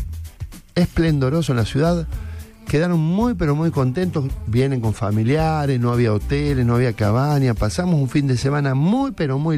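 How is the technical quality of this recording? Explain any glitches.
Two glitches break the recording. At 1.47 s and 2.83 s the sound jumps abruptly, losing roughly 40 ms and then about 10 ms with no gap of silence. Likely cause: dropped buffers (overrun), where samples were overwritten before being read and the remaining audio was spliced together.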